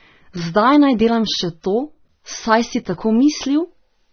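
Speech throughout, with nothing above 6.3 kHz: low-bitrate audio saved at a high bitrate, likely a roughly 27 kbit/s AAC encode re-saved as 192 kbit/s MP3, which cannot restore the lost band.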